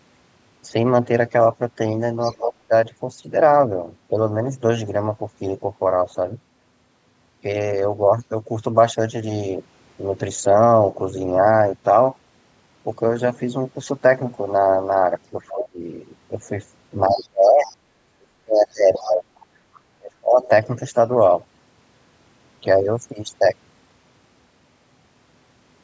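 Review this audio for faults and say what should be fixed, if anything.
A second, fainter voice slips in under the talker at 2.21 to 2.53 s, 15.48 to 15.65 s, 17.22 to 17.76 s and 18.72 to 19.46 s. It sits well below the main speech, roughly 10 to 25 dB down, and is loudest around 15.5 s. This is the other side's voice leaking through: the talker's loudspeaker output likely reached the microphone, and the echo canceller left a residue of it in the signal. To prevent this, use a headset or improve the echo canceller's tail modelling and residual echo suppression.

The talker's own speech sinks or breaks up at 2.40 to 2.72 s, 15.51 to 15.80 s, 17.07 to 19.30 s and 19.98 to 20.49 s. The level drops by about 25 to 35 dB at the deepest points. The longest stretch runs about two seconds, from 17.07 to 19.30 s, and it overlaps the leaked voice. This is speech suppressed in double talk: with both sides speaking at once, the canceller likely could not separate the local voice from the echo and attenuated both. 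To prevent this, tune the double-talk detector so it holds back less suppression whenever local speech is present.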